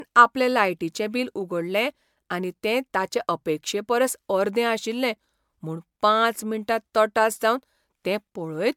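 All the way through, the speech has that swirly, hollow smear of generation loss, likely from around five MP3 passes at 128 kbit/s, with nothing above 19.9 kHz.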